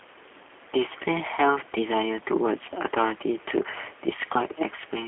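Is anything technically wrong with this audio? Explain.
Yes. The speech runs through the G.729 codec for the whole clip. The sound fits an 8 kbit/s G.729A stream. The codec does not store the waveform. It models each 10 ms frame as a vocal tract filter, a pitch predictor and a few pulses. The decoder then rebuilds the speech from those parts. Nothing above 3.7 kHz survives, and the band sits roughly between 300 Hz and 3.4 kHz. The damage is plainly audible. The speech sounds rough, buzzy and slightly synthetic.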